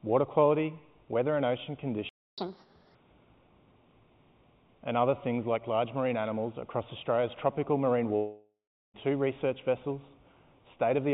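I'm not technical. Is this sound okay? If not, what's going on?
No. A playback stall hits at 2.09 s: the sound stops dead for about 0.29 s and then resumes. The likely cause is that the player ran short of incoming audio, or was briefly held up, and had nothing to play.

Catch-up at higher speed follows from 2.38 s to 2.95 s. To win back the lost time, the player runs 1.5 times faster, so everything sounds rushed and noticeably higher in pitch. At 2.95 s it drops back to normal speed.

A long network dropout starts at 8.16 s and lasts until 8.96 s. The last bit of sound is stretched into a fading buzz, then there is silence, and the audio returns with about 0.78 s missing. The likely cause is audio that never arrived over the connection.

The whole clip also sounds dull and narrow, with nothing above 4 kHz, which is normal for this kind of phone-style call connection.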